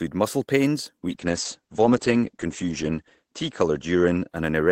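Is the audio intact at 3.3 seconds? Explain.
No. A call bitrate drop runs from 1.09 s, just after "muscle pains", to 4.61 s. Starved of bits as the rate falls from 32 to 10 kbps, the encoder codes coarsely and narrows the band from 20 kHz to 8 kHz. The sound turns muffled and rough.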